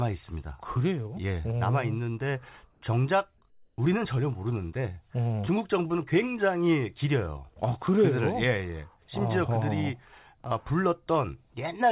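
Comfort noise in place of the background at 2.72 to 2.82 s and 3.5 to 3.78 s: in these pauses the real background gives way to a smooth, featureless hiss, about 2 dB and then about 3 dB off its level. The likely cause is the sender going silent between phrases and the receiver filling the gap with synthetic noise. Like the rest of the call audio, this hiss stops at 4 kHz.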